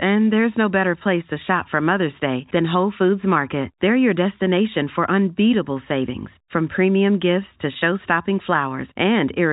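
No technical faults can be heard in this speech clip.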